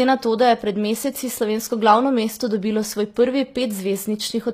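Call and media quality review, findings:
HE-AAC compression, throughout the speech. Treble present to 14.9 kHz but gritty, lispy s sounds; likely spectral band replication copying lower bands upward, harmonics misaligned. Unlike plain low-pass dullness, top stays bright. Damage fits roughly 24 kbps.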